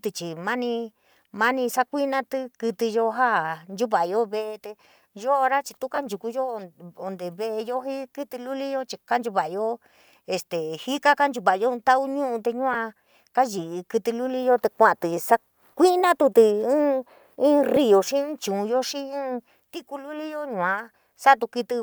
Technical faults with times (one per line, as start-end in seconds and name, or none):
5.95-5.98 lost LE Audio frames
12.73-12.75 lost LE Audio frames
17.76 lost LE Audio frames